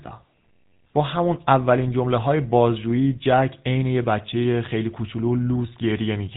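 A speech recording carries the GSM full-rate codec from start to finish, and the damage is plainly audible: the voice has a buzzy, gravelly roughness. This codec models the vocal tract and excites it with a sparse, regularly spaced pulse train, and the coarseness is consistent with the 13 kbps full-rate coder. On a spectrogram the energy stops abruptly near 3.8 kHz, leaving the region above empty for the whole clip.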